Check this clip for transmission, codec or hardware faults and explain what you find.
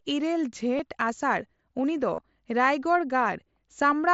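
There are two short dropouts of concealed Bluetooth headset packet loss. They fall at 0.78 s and from 2.15 to 2.18 s. The second, about 30 ms of missing audio, points to four lost frames. The receiver filled each gap by repeating a matching stretch of recent waveform. The first is a very short buzzy hold. The second is a brief buzzy hold with a slight warble on recovery. The mSBC headset codec adds only light graininess.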